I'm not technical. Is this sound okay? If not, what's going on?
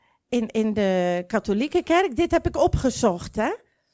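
Yes, nothing wrong here.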